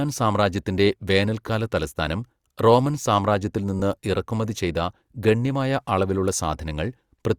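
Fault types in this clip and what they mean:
Lost LE Audio frames: Brief gaps in the Bluetooth LE Audio stream. The LC3 decoder fills them by replaying the last spectrum with random signs. A short noisy smear replaces the speech. It lasts 15 ms at 1.48 s, before "തലസ്ഥാനം റോമൻ സാമ്രാജ്യത്തിൽ", and 7.5 ms at 3.79 s, before "ഇറക്കുമതി ചെയ്ത ഗണ്യമായ അളവിലുള്ള".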